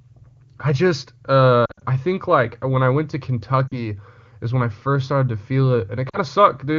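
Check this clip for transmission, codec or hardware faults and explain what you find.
Three bursts of lost AMR speech frames occur, carried over wideband AMR whose clean, clear sound points to its highest rate, around 23.85 kbit/s.

Lost AMR speech frames, 1.65–1.84 s, after "I just" and before "I think like when"; 3.68–3.79 s, after "when I went to"; 6.09–6.17 s, after "first started to feel". Corrupted frames failed their checksum, so the decoder extrapolated the last good pitch and spectral envelope at falling gain. Each gap gives a brief dip that drops to near silence within two frames, and the voice returns weak or rough for a moment. The first is choppier, with dropouts scattered over 160 ms and the longest lasting 60 ms.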